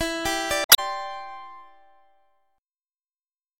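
Damaged data in a compressed stream appears from 0.62 to 0.79 s. For about 0.17 s part of the compressed file no longer holds valid data, so the decoder misreads or discards the frames there, loses its place and hunts for the next intact frame header before normal decoding resumes. The result is a chirp, squawk, click or short hole that breaks the continuity of the audio around it.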